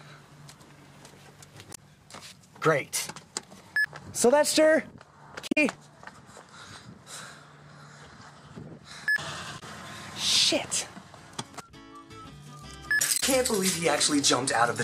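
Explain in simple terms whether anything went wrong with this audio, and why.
Brief glitches at 1.71, 5.47, 9.56 and 13.16 s, each about a tenth of a second or less, are damaged data in a compressed stream: corrupted bytes briefly throw the decoder out of sync.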